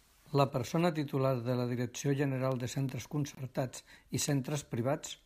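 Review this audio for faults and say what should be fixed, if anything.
A brief dropout to silence from 3.35 to 3.37 s, about 25 ms, with smeared edges: a gap at a join of encoded pieces, left by untrimmed encoder delay and end padding. Trim each piece's encoder delay and padding, or encode the whole program in one pass, before joining.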